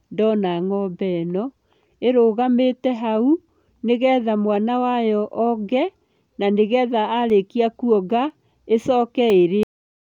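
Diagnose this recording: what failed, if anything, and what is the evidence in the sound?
From 5.31 to 9.30 s, starting just after "hau nĩgetha mwana wayo", the speech carries a small tick once every second, about five in all. These are periodic USB or driver dropouts at the driver/buffer stage: a background task stalls the audio path on schedule, and each stall leaves roughly a millisecond of silence.

At 9.63 s the speech stops dead mid-sound and falls to digital silence with no natural decay. This is a cut-off end at the storage stage: the final buffers were never written out, so the recording ends abruptly instead of finishing the sound.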